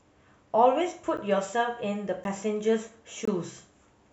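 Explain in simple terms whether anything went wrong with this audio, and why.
Three blocks of digital silence interrupt the speech: short ones at 1.17 s and 2.24 s, and a longer one from 3.25 to 3.28 s. Each time, the audio drops to total silence and snaps straight back. The abrupt edges make the first two sound like ticks and the third like a brief hole. The 11 ms and 21 ms gaps fit one and two missed 512-sample buffers. Unlike a fade or a muffled dropout, the sound stops completely, with no softening.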